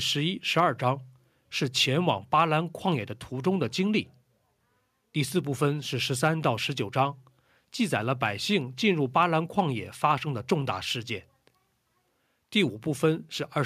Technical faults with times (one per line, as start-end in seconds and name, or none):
none